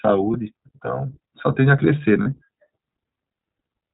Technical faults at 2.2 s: iLBC codec; lost iLBC frames

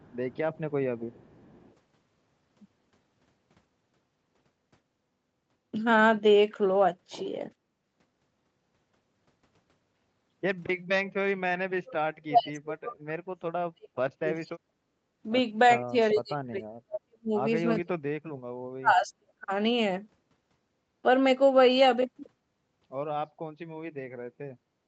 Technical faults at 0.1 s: echo leak

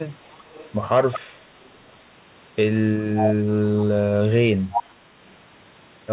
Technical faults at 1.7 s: echo leak

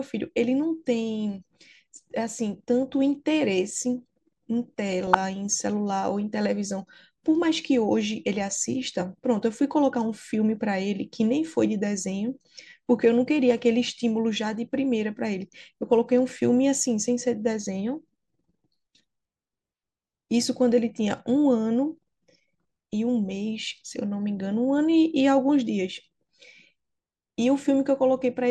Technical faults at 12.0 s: MP2 compression

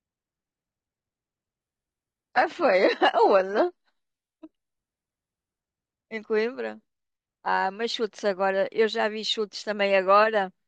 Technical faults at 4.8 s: adaptive stream at a lower bitrate

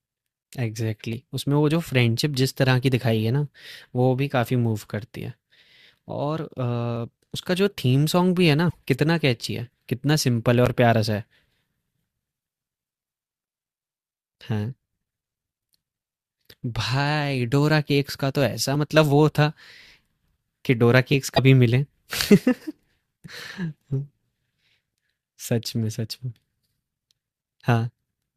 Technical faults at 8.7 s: broken MP3 bit reservoir

